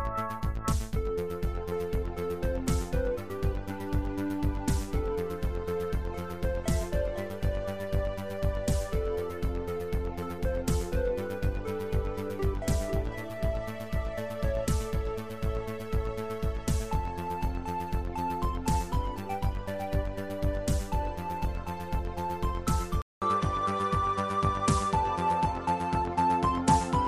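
At 23.02 s the audio drops out for about 200 ms, then resumes with nothing above 11.4 kHz, a level shift of roughly 5 dB, and a new, faint background noise well below the signal. These changes persist to the end, which points to an input switched to a poorer device as the likely cause. A plain filter or EQ change would narrow the band without the gap, the new noise floor, or the jump in level.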